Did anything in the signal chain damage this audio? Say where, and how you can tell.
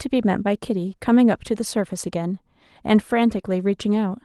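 Yes. The damage happened in the network stage of an Opus call, with audio band-limited to about 12 kHz. Around 3.37 to 3.39 s and again at 3.45 to 3.47 s there is a lost packet rebuilt from error correction. Each spot is a 20 ms frame that turns briefly rougher and noisier, with no gap. The following packet carried a low-bitrate backup copy, and the decoder played that coarser version in place of the real one.

Between these, from 3.41 to 3.45 s, there is a short concealed packet loss. You hear a brief smear or wobble rather than silence. About 20 ms of audio arrived too late to use. The receiver invented roughly 18 ms to cover it by extending the preceding sound, then crossfaded back into real audio.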